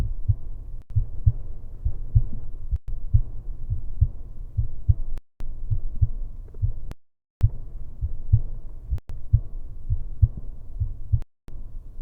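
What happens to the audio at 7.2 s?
The sound cuts to silence from 6.92 to 7.41 s, a gap of about half a second, likely a Bluetooth stall where delayed packets left the headphones' buffer empty.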